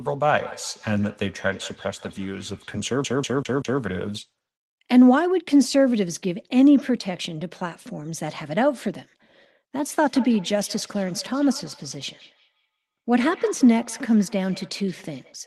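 From 0.35 to 2.8 s, two devices on the same call are sharing one room, forming a feedback echo between two devices. One device plays back what the other's microphone sent, and that microphone picks it up again. Neither echo canceller removes sound played by the other device, so each word returns roughly every 150 ms as a thinner, ringing copy, peaking at about 19 dB below the speech.

From 3.04 to 3.81 s, the playback behaves like a CD stuck on one turn, as a scratch would do when it throws the laser back to the same point on each rotation. A 0.19 s slice of speech repeats four times, with a brief mute at each jump, producing a fast, even, mechanical stutter.

From 10.02 to 15.39 s, the same two-device loop returns. Words again come back about every 150 ms, this time peaking at about 23 dB below the speech.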